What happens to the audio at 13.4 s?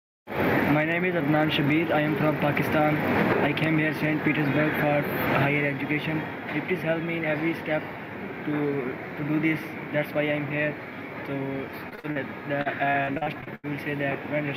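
At 13.4 s the audio is inside a burst of repeated packet loss (robotic sound) running from 12.61 to 13.65 s. The transmission dropped or delayed data again and again, and each hole was patched by extending the last sound, so about nine short dropouts, the longest around 83 ms, leave roughly 29% of the stretch concealed. It sounds choppy, with pieces missing. On a spectrogram, harmonics smear into flat horizontal streaks, broken by vertical seams at each patch.

Under this, and across the whole clip, there is gain pumping. The gain is pulled down under each loud sound, swinging by around 15 dB. The likely cause is a fast limiter or compressor clamping gain that was set far too high. On a waveform the envelope looks flattened, with loud and soft passages pushed close in height.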